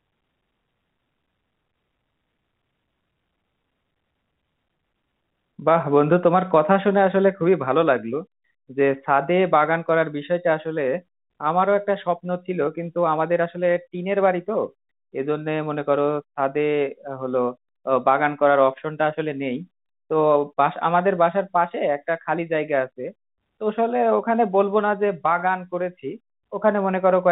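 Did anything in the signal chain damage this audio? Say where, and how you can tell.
No, nothing in this speech recording stood out on listening as damage from any stage of the signal chain.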